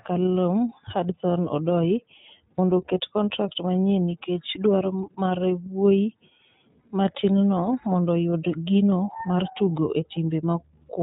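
From start to finish the speech sounds slightly rough and synthetic, with a clearly audible coarseness and nothing above 4 kHz, so sibilants and breathiness are dulled. This is the iLBC codec, a narrowband VoIP coder that encodes each frame's excitation independently rather than predicting from the previous one. The damage fits its 13.33 kbps mode with 30 ms frames, which trades some naturalness for robustness.

At 2.56 to 2.59 s, just before "oket kontrak manyien nikech", a brief held, faintly buzzy vowel-like sound replaces the speech, and it happens again at 6.81 to 6.84 s, just before "matinno mondo oyud gino". These are lost iLBC frames. Each gap lasts about 30 ms, which fits one missing frame. The decoder fills it by repeating the last pitch cycle mixed with noise. Because every frame decodes independently, normal speech returns almost immediately afterward.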